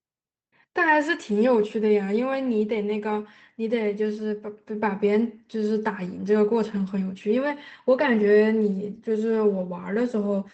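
Speech carried over an Opus call path with audio limited to about 8 kHz, showing lost packets rebuilt from error correction: brief rough, noisy spots at 1.61 s and, longer, 6.63 to 6.81 s, where low-bitrate redundant copies replaced the missing audio.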